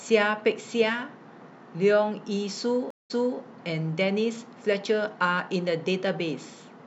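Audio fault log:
2.90–3.40 s, stream reconnect: the speech cuts to about 193 ms of silence, then resumes roughly 0.3 s earlier with a soft fade-in as a fresh decoder starts mid-stream. That repeated stretch of speech, not a skip or bare gap, separates it from an ordinary dropout.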